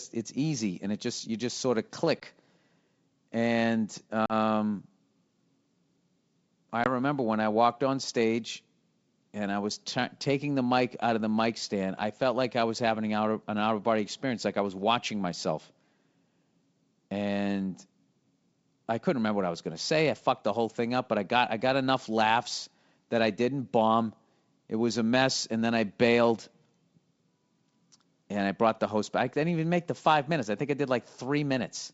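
A speech recording, carried over a G.722 wideband call, has three brief hard-edged dropouts where the sound cuts to silence. The first comes at 2.20 to 2.24 s, just after "you just sort of". The second, at 4.26 to 4.33 s, loses about 40 ms. The last, at 6.84 to 6.89 s, comes just before "when I walked on". After each gap the speech resumes with brief distortion. This is packet loss on an ADPCM call. Each 20 ms gap fits a single lost packet and the 40 ms gap fits two. Because the lost packets never reached the decoder and the missing audio was filled with silence, the decoder's adaptive predictor and step size fell out of step with the sender's and needed some tens of milliseconds to realign.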